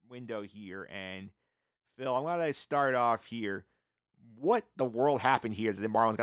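From 0.05 to 3.63 s the automatic gain is rising, lifting the speech and background together by about 7 dB as it decides the input is too quiet. It does the same again from 4.26 s to the end, with both swelling gradually, all within a band that stops at 4 kHz.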